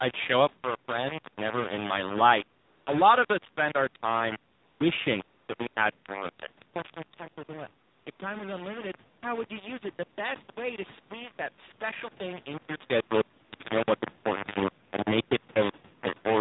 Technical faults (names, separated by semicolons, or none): low bit depth without dither; AMR narrowband mobile codec; AMR comfort noise